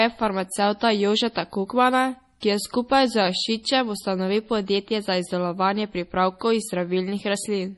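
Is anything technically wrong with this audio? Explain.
Yes. Throughout, the speech sounds watery and swirly, with nothing above 11.5 kHz. This is likely heavy MP3 compression, which fits a bitrate around 32 kbps. The encoder drops treble and weak detail to save bits.

From 2.40 to 2.43 s, just before "ki je skupaj z", there is pre-echo. Coding noise spreads about 23 ms ahead of an attack. It is heard as a brief hiss before a softened onset.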